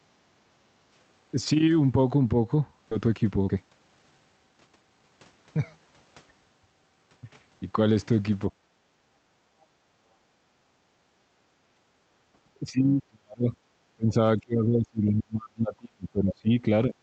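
Background gated by the echo canceller, 0.37 to 0.62 s: while the far end played, the canceller pulled the microphone down by about 13 dB, so the room sound briefly dips and then returns.

Skip ahead, 2.91 to 2.93 s: roughly a second of speech was discarded with no fill, and playback jumps straight to later audio with an abrupt, almost seamless join.

Jitter buffer speed-up, 3.01 to 5.33 s: the buffer held too much audio, so the receiver trimmed short pitch-period slices, around 0.4 s in total. Speech runs at 117 percent speed at unchanged pitch and sounds hurried.

Background gated by the echo canceller returns at 8.92 to 9.62 s and 10.36 to 11.86 s, each about 11 dB down, and at 12.35 to 12.40 s about 9 dB down. Each time the room tone sinks while the canceller clamps and recovers when it releases.

Speech suppressed in double talk, 12.71 to 13.53 s, 13.95 to 14.16 s, 14.36 to 16.65 s and 16.87 to 16.95 s: the voice is turned down, dropping by roughly 40, 30, 35 and 15 dB respectively. 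This is likely the echo canceller failing to separate the talker from loudspeaker echo while both sides spoke.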